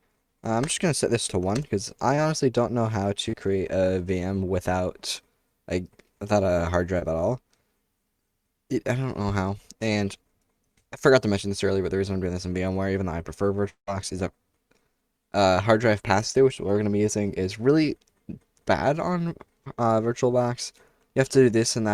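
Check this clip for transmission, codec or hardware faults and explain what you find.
Yes, the clip has network transmission faults: five short concealed packet losses and one longer gap.

The short concealed packet losses occur at 2.15–2.19 s, 3.29–3.35 s, 6.99–7.03 s, 16.31–16.36 s and 19.64–19.68 s. Each time, about 20 to 40 ms of data failed to reach the decoder in time. The receiver covered each hole by extending the preceding sound for roughly 17 to 36 ms before rejoining the real signal. The result is a brief smear or wobble.

The long network dropout runs from 13.69 to 13.89 s, and is likely a stretch where incoming audio stopped arriving, with about 180 ms missing. The sound at this point is not cut off abruptly. The last sound is carried on as a fading buzz or hiss for much of that span, and the final part is near-silent before the audio resumes. Whatever occurred during the gap is simply absent when playback picks up again.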